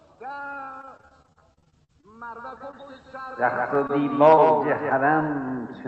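From 0.81 to 2.05 s the sound turns choppy and robotic, with pieces missing: this is repeated packet loss, fifteen gaps up to 48 ms each, patched by continuing earlier sound across roughly 29% of the stretch.

From 2.39 to 4.92 s a flat, echo-like second copy trails roughly 150 ms behind at about 5 dB quieter, starting and stopping abruptly. This is a doubled audio track, likely captured twice through a slower path.

Within that span, brief smears or wobbles at 2.71 to 2.75 s, 3.87 to 3.91 s and 4.35 to 4.39 s are short concealed packet losses. Each time, about 20 ms failed to arrive and was filled by extending the preceding sound.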